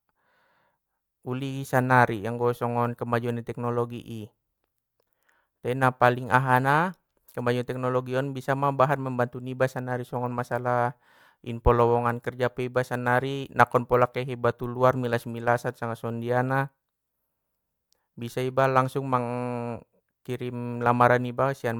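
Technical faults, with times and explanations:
No technical faults are audible anywhere in this speech recording.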